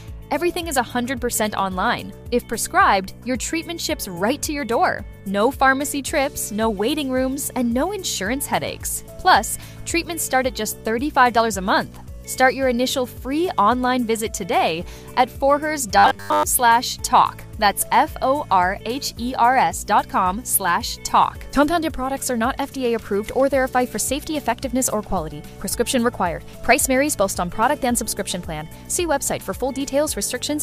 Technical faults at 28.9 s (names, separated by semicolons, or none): none